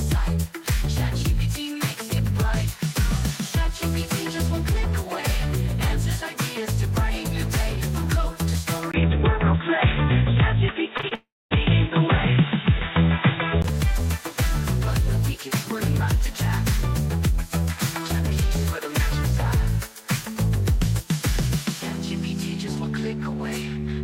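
At 8.92 s the sound turns dull and boxy after a 20 ms gap, likely an input switched to a poorer device. Until 13.64 s nothing passes above 3.8 kHz, the level shifts by about 5 dB, and a faint new noise floor appears. A spectrogram shows the upper band abruptly emptied, with a thin blank column at the switch.

Inside that stretch, short concealed packet loss strikes three times, at 10.97 s, 11.01 s and 11.09 s. Each time about 20 ms never arrived and was patched by extending the previous sound for roughly 15 to 22 ms. The result is a brief smear or wobble, seen as smoothed, repeated waveform cycles.

From 11.15 s to 11.53 s a long network dropout, likely from a network stall, leaves about 0.36 s missing. The receiver carries the last sound on as a fading buzz or hiss, then about 0.24 s of silence follows, a flat waveform line, before the audio resumes without the lost part.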